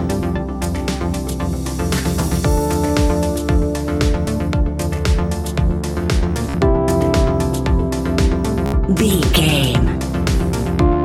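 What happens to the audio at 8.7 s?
A Bluetooth stutter hits from 8.66 to 8.74 s. Audio packets arrived late or not at all, so the receiver kept replaying its last short buffer. That gives a brief buzzy, machine-gun repeat. About 73 ms goes missing, which fits roughly five lost packets.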